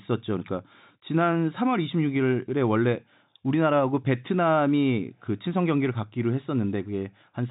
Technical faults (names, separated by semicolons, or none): none